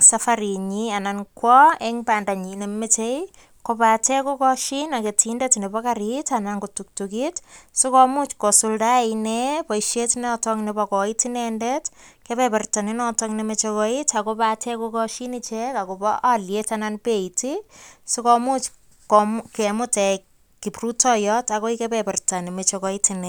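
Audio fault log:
No audible faults anywhere in this speech recording.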